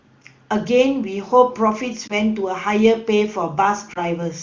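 At 2.07 to 2.14 s the speech briefly dips and warbles. The same thing happens again at 3.94 to 4.02 s. Both are lost AMR speech frames. Each sounds like one missing 20 ms frame. The decoder covered the gap by repeating the last good pitch and vocal tract settings at lowered gain. The voice then comes back weak or rough for a moment. The clear wideband sound around both dropouts fits a high AMR-WB rate.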